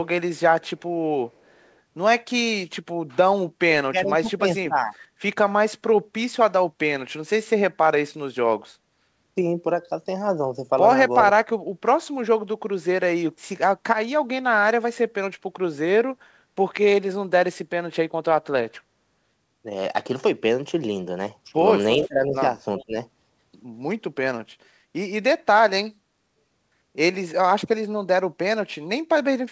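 At 0.64 to 0.82 s and again at 1.31 to 1.76 s a faint delayed copy of the speech trails the talker by about 0.39 s, sitting very low beneath the direct signal. This is an echo leak, likely from a far-end loudspeaker whose echo canceller let part of the microphone pickup return down the line. A brief, louder burst of the same 0.39 s echo appears at 22.80 to 22.84 s.

Between 3.91 and 4.94 s the talker's level ducks by up to about 20 dB, in pieces totalling around half a second. This is speech suppressed in double talk, likely caused by the canceller failing to separate near speech from echo and attenuating both. It happens again at 21.97 to 22.35 s (up to about 20 dB) and 22.79 to 22.95 s (about 15 dB), overlapping that last echo burst. Throughout, the band stops at 8 kHz, which fits a 64 kbps G.722 call path.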